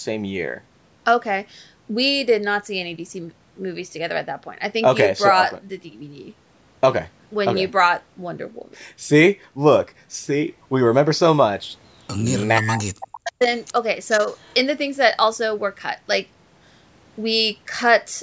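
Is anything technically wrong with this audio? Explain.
Yes, there are two related problems, both from a speakerphone-style call path.

From 12.6 to 13.42 s there's speech suppressed in double talk. Both ends were likely talking at once, and the echo canceller couldn't tell this talker apart from its loudspeaker echo, so it clamped down on everything. The voice dips hard, at worst around 40 dB, and drops out in pieces totalling roughly 0.7 s across that span.

Then there's echo leak at 13.01 to 13.18 s, 14.1 to 14.18 s and 14.34 to 14.54 s. These are short scraps of the voice coming back about 444 ms late. The second is the most noticeable, roughly 15 dB down. The first sits around 20 dB under the speech, and the last is barely there. The likely cause is the far end's echo canceller not fully removing what its microphone picked up from its loudspeaker, so the remainder was sent back down the line. 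The bandwidth tops out at 8 kHz, which is just the call's normal microphone processing.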